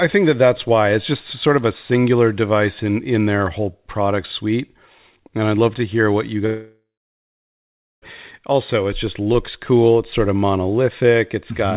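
From 6.46 to 8.04 s, a fading buzz gives way to 1.2 s of silence, likely a long network dropout. Unlike a brief glitch, the lost stretch never returns.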